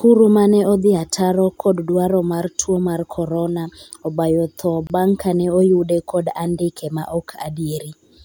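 A gap at a join of encoded pieces opens in the speech from 4.87 to 4.90 s, a gap of about 28 ms where separately encoded segments were joined untrimmed.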